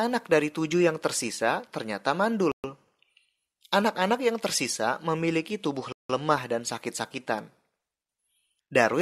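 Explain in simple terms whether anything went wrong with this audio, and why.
Twice the speech drops into dead silence and then carries on. At 2.52 s, right after "tujuh yang tersisa ternyata", it cuts out for about 0.12 s, and at 5.92 s, after "yang tersisa memiliki tubuh", for about 0.17 s. That's likely a Bluetooth stall: interference delayed the wireless packets, the headphones ran out of buffered audio, and playback just paused until the missing data arrived.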